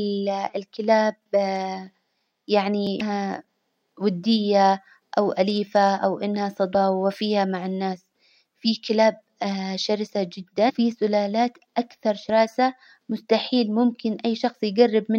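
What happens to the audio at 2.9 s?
A block of digital silence falls at 2.87 s. For about 1.5 ms the signal drops out and returns with no fade, most likely because the output buffer wasn't filled in time. The gap is far too short to hear as a hole; what comes through is a single sharp tick from the two abrupt edges, and its length fits a block of about 64 samples.

Damaged data in the compressed stream follows at 3.00 s. A stretch of the encoded speech reached the decoder corrupted, so it misread those frames, lost its place and had to hunt for the next valid frame header before it could resume. That appears as a brief glitch lasting under 20 ms, arriving just after the tick, as decoding picks up again.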